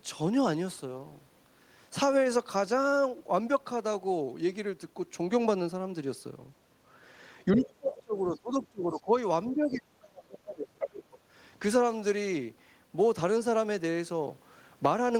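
From 7.52 to 7.68 s, faint scraps of the other side's voice leak through, about 15 dB below the talker, and recur at 8.62, 9.45, 9.69 and 10.79 to 11.18 s, the last nearly as loud. This is likely residual loudspeaker echo the canceller missed: a second voice rather than missing speech. Overlapping these, speech is suppressed in double talk from 7.53 to 9.12 s and 9.49 to 10.86 s, dipping by up to about 25 to 30 dB. The talker likely fades only while the far side speaks, unlike a random dropout.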